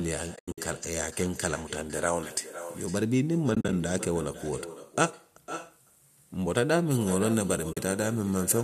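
Throughout the speech, an echo with no canceller returns each phrase about half a second later, about 14 dB down. The far end's loudspeaker is feeding its microphone, and nothing removes it.

From 0.36 to 0.58 s, AAC frame loss with muting leaves soft-edged gaps totalling 170 ms across 220 ms, the longest around a tenth of a second. The decoder zeroed the missing frames, so the sound fades out and back. The 10 ms gap sizes fit the short frames of low-delay AAC, the likely codec here.

From 3.55 to 3.73 s, the same muting loss recurs more lightly: 80 ms of dropouts scattered over 180 ms, none longer than about 40 ms.

From 6.91 s to the end, pre-emphasis is left on, with treble about 8 dB too strong at 10 kHz relative to 1 kHz. This fits a CD 50/15 µs curve whose de-emphasis was never applied, and the speech turns thin and sibilant.

Within that stretch, from 7.73 to 7.77 s, a final 40 ms muted hole opens and closes smoothly.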